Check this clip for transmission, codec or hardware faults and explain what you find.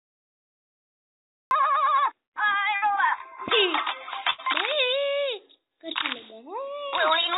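Two kinds of fault are present: a cut-off start and two bursts of packet loss.

The cut-off start runs from 0 to 1.51 s. That stretch is pure digital silence. At 1.51 s the audio appears abruptly, already in the middle of a sound. There is no attack and no fade-in. The capture or stream began late, so the opening of the sound was never recorded. The hard edge from zero to full level gives the entry a jump rather than a natural onset.

The first burst of packet loss is at 2.76 s and lasts to 2.84 s. The second is from 4.30 to 4.40 s. Packets arrived too late or never arrived, so the receiver filled the gaps by extending the last sound and lowering its level. The first gap holds about 57 ms of filler and the second about 80 ms. Each sounds like a brief held buzz or a fading hiss. Then the audio jumps ahead, skipping about 60 ms and 80 ms of real sound.

The band stops at 4 kHz. That fits a G.711 mu-law call path at 64 kbps.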